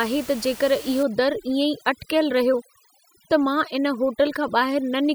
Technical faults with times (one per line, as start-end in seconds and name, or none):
1.03-5.14 overdone noise removal